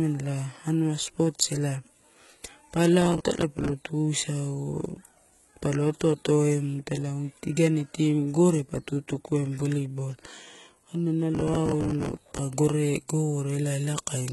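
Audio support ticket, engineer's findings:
Throughout: heavy codec damage, gritty, metallic treble on s sounds, spectrogram shows nothing above 11.8 kHz and copied-looking upper bands. Likely HE-AAC compression, band replication, consistent with roughly 16 kbps.

3.02–3.69 s and 11.35–12.39 s: processor overload crackle, tearing bursts. Waveform shows repeated hard-edged stretches of old audio, spacing pointing to roughly 10 ms buffers missing deadlines; vertical streaks on spectrogram.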